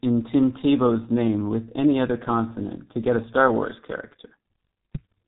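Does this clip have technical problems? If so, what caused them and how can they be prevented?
Yes. Throughout, heavy G.723.1 codec damage, consistent with roughly 6 kbit/s, leaves the speech muffled and hoarse with nothing above 3.8 kHz. Use a wideband, higher-bitrate codec instead.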